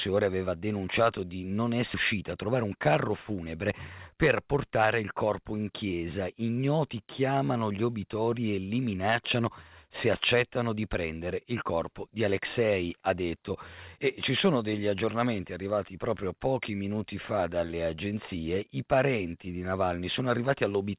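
At 1.94 to 1.96 s, right after "aveva denunciato di non", a skip ahead occurs. Roughly 0.7 s of audio was discarded while later audio was already queued, so playback leaps forward. The two sides are spliced almost directly, with no fill and a sudden jump in the sound.

From 2.14 to 3.45 s comes a jitter buffer speed-up. The receiver's buffer was holding more delay than it targets, so it trimmed short pitch-period pieces repeatedly, removing about 100 ms in total. The speech runs at 107% speed at unchanged pitch and sounds hurried.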